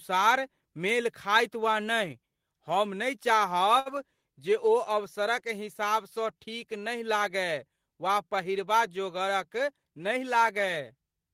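A speech recording with two network-timing faults. At 3.79 to 3.89 s there is a short stall from a late packet: the jitter buffer ran dry, so the receiver held the last sound for 63 ms, and nothing was lost. From 9.59 to 10.17 s a jitter buffer speed-up trims small pitch-period chunks, about 70 ms in total, so the speech plays 111% fast at unchanged pitch.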